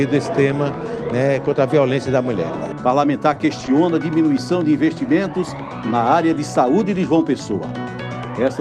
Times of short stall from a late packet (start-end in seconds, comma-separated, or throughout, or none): 3.33-3.40